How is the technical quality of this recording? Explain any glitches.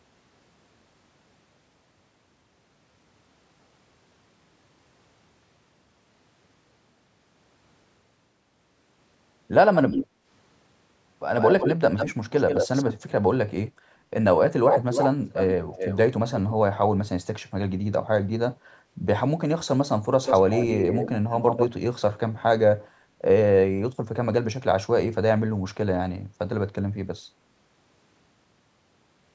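The speech suffers from recurring echo leak and one brief gating dip. Content above 8 kHz is absent, consistent with ordinary call microphone processing.

Echo leak occurs at 9.74–10.07 s, 11.4–12.94 s, 14.71–15.98 s and 20.24–21.69 s. A delayed copy of the voice trails the original by 144 ms, or by 304 ms in the third stretch, only a few decibels quieter. The likely cause is a far-end loudspeaker whose echo canceller failed to subtract the pickup.

The background is gated by the echo canceller at 10.07–10.26 s, right after the first echo. The canceller suppresses the microphone for about a fifth of a second, so the room tone dips by about 7 dB and then recovers once suppression releases.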